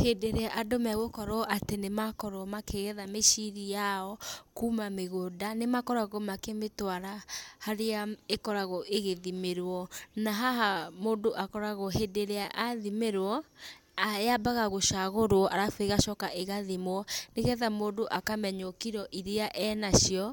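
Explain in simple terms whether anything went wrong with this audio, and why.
Nothing went wrong with this audio, because no fault can be heard anywhere in the recording.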